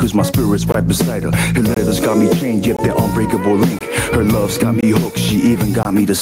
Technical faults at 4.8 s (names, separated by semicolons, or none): gain pumping; gap between chunks